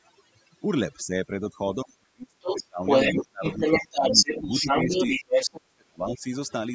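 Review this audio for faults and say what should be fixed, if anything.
Overdone noise removal runs through the whole clip. The suppressor pulls individual frequency bands toward silence wherever they sit near its noise estimate, taking quiet parts of the speech with them. The result is speech over an eerily dead background with twinkling specks. On a spectrogram this appears as isolated bright dots in black gaps and ragged, hollowed edges on the speech harmonics. Easing the reduction strength and adding a spectral floor would prevent it.

Speech suppressed in double talk occurs at 1.04–2.83, 3.18–3.61, 3.86–5.07 and 5.46–6.26 s. The talker's speech dips, dulls or breaks into fragments while the far side plays on the loudspeaker, likely because the echo canceller turned everything down when it couldn't tell near speech from loudspeaker echo. The drops reach about 35, 30, 10 and 40 dB respectively. 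The waveform shows sudden envelope holes, and the spectrogram shows the upper bands vanishing first. A canceller with proper double-talk detection and gentler residual suppression would avoid this.

The other side's voice leaks through at 2.47–2.65, 2.86–3.22 and 3.43–5.51 s. A second voice comes through alongside the talker, likely loudspeaker sound the echo canceller failed to remove from the microphone. It is roughly level with the talker in the first burst and noticeably stronger in the later two. On a spectrogram a second, unrelated harmonic pattern overlaps the talker's. Better canceller convergence or a headset would stop it.

The call's microphone processing band-limits the sound to nothing above 8 kHz, which is expected.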